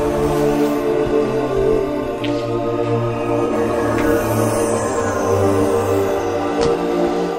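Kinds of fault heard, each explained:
AAC frame loss with concealment: around 3.46 to 3.53 s the decoder patches a gap of about 43 ms, which fits a single lost frame, leaving a brief smeared spot.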